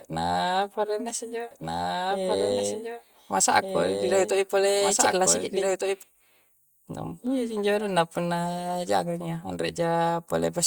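A doubled audio track runs from 1.51 to 6.03 s in this speech recording: a second full-band copy trails the original by about one and a half seconds, a few decibels quieter, dry and abruptly switched in and out, likely from a slower second capture path.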